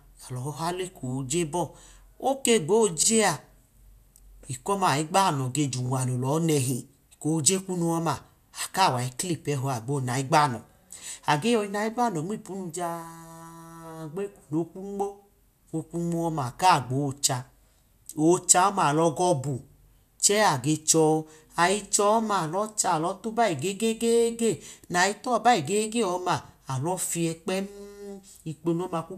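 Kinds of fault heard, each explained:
Repeated frames: a stretch of compressed speech is decoded again, so it stutters. A 48 ms block plays twice at 3.03 s, and a 24 ms block three times at 5.86 s, each adding 48 ms. Waveform and spectrogram show identical slices side by side.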